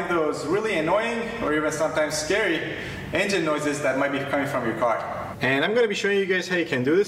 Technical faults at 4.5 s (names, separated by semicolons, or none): none